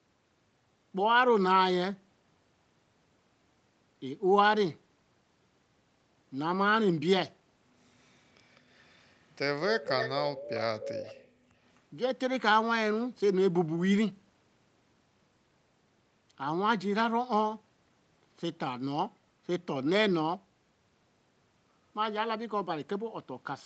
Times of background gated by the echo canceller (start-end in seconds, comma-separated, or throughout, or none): 11.24-11.54